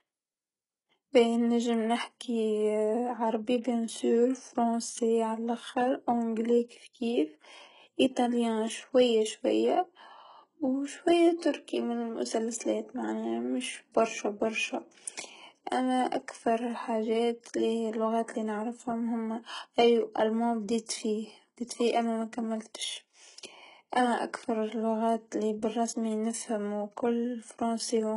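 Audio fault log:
Throughout: HE-AAC compression, heavy. The treble sounds synthetic and metallic, with s sounds gritty and lisping. Nothing is present above about 11.1 kHz. The damage fits a very low bitrate, around 12 kbps, and the likely cause is spectral band replication: upper bands are copied up from lower ones under a coarse envelope, so harmonics fail to align across the crossover. On a spectrogram the top region looks blocky and repeated, ending in a flat ceiling.
6.68 s and 20.86 s: pre-echo, at the first after "فرونسي على لاخر أونجلي" and at the second after "هوما أي و ألماني". Each sharp attack is led by a brief hiss, spreading about 24 ms and 29 ms, and the onset sounds softened. The codec spread its quantisation noise across the whole block, so noise sized for the loud attack leaked into the quiet gap before it. On a spectrogram a faint broadband smear appears just ahead of each onset, and the waveform shows low-level fuzz before the transient.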